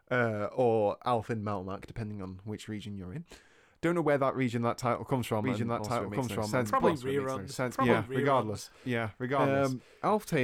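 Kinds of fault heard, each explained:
Doubled audio track: right after "region that title comes", around 5.44 s, a second full-band copy of the speech kicks in abruptly, about a second behind and roughly as loud, with no room colour, and it runs to the end. It's likely a second, slower capture path.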